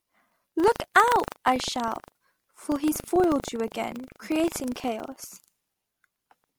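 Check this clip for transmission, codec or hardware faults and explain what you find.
One hardware fault runs through the whole speech clip: buffer tearing. Writer and reader of the playback ring buffer have slipped, so each 40 ms period carries a small sliver of audio from about a tenth of a second earlier, spliced in with hard joins. This gives a robotic 25 Hz rattle under the speech. On a waveform it shows as abrupt steps every 40 ms. A spectrogram shows evenly spaced vertical broadband lines.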